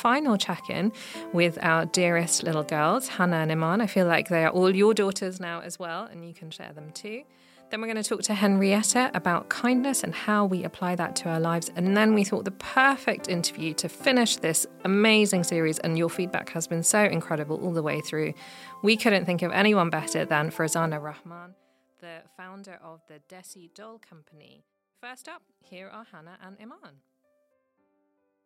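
A fine ticking, zipping texture rides on the audio while its level moves, from 4.88 to 5.50 s (a drop of about 10 dB), 7.85 to 8.43 s (a rise of about 10 dB) and 20.92 to 21.48 s (a drop of about 25 dB). This is zipper noise: the gain is changed in unsmoothed steps, roughly 40 a second, each leaving a small click.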